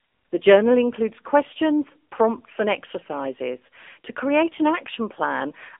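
Throughout, the speech carries the AMR narrowband mobile codec: nothing above 3.6 kHz, a 250 Hz to 3.5 kHz line band. Unlike plain phone filtering, the voice is rebuilt from sparse pulses, giving a plainly buzzy, synthetic edge that fits a 7.95 kbps mode.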